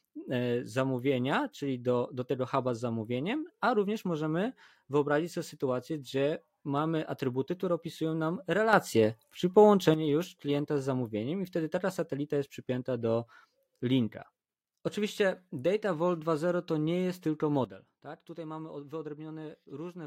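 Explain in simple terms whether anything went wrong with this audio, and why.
Two sudden gain jumps occur. At 8.73 s, after "atrybuty które opisują nam", the speech and background noise get abruptly louder, dropping back at 9.94 s before "już klienta z zamówieniem". At 17.65 s, after "to nie jest tylko", everything turns much quieter until the end. The likely cause is a volume setting changed instantly, with no gradual fade.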